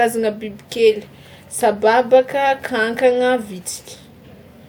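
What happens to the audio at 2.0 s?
Nothing goes wrong at 2.0 s; the speech plays through that moment intact, with no dropout, click or distortion.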